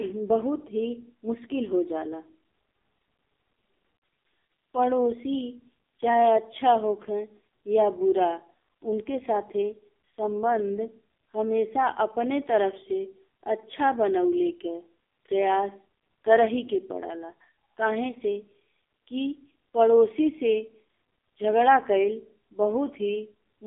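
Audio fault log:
Throughout, AMR narrowband mobile codec: the speech sounds buzzy and synthetic, with nothing above about 3.7 kHz and a thin 150 Hz to 3.6 kHz line band. That fits AMR-NB at around 5.9 kbps, where few pulses per frame drive a vocal-tract model. Plain band-limiting would not add that artificial buzz.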